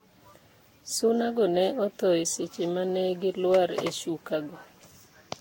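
From start to finish the speech has the swirly, hollow, smeared character of generation loss, likely from being run through a lossy codec around seven times, each pass re-quantising on a shifted frame grid. Consonant attacks blur, and nothing remains above 16.6 kHz.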